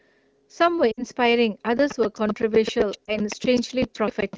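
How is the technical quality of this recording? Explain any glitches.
The speech has two technical faults over the light, clear coding of AMR wideband.

Lost AMR speech frames occur at 0.91 to 1.03 s (about 60 ms, suggesting three 20 ms frames) and at 3.06 to 3.18 s (20 ms, one frame). Radio errors corrupted those frames, so the decoder repeated the last good pitch and vocal-tract settings while lowering the gain. The first gap drops to near silence within two frames. The second is a brief dip or warble. On a spectrogram, frozen harmonics fade out, and the speech returns weak or rough.

Buffer tearing runs from 1.66 s to the end. The writing program and the playback hardware have slipped against each other. Roughly a tenth of each buffer holds audio about 300 ms old, with hard joins on both sides. The result is a robotic rattle at 7.81 Hz, which fits a 2048-sample buffer. The waveform shows periodic discontinuities, and the spectrogram shows vertical splice lines wherever there is signal.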